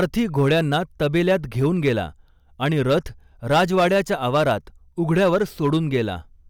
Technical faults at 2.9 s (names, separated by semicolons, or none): hard clipping